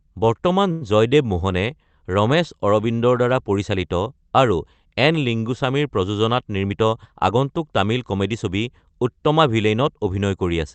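At 0.71 s a short stall from a late packet interrupts the speech for about 98 ms, until 0.83 s. A packet missed its slot, the jitter buffer emptied, and the receiver held the last sound until the packet turned up, then resumed from the same point. Nothing is lost, and that sets it apart from a dropout or concealed loss. A sound simply lingers, with a faint buzzy or dipping quality, and everything after it lands about 98 ms later.

Right after "লিংগুছামীৰ প্ৰযোজনাত", from 6.56 s to 7.46 s, a jitter buffer speed-up makes the speech run at about 112% of normal rate. Too much audio had piled up in the buffer, so the receiver trimmed many tiny slices of one or a few pitch periods, about a tenth of a second in all. The pitch stays put while the pace hurries, which distinguishes it from a sample-rate or playback-speed error, where pitch would rise too. All of this passes through an Opus call path at 32 kbps, limited to about 8 kHz.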